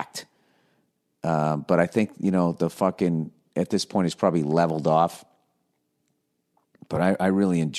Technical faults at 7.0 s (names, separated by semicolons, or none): AAC frame loss with concealment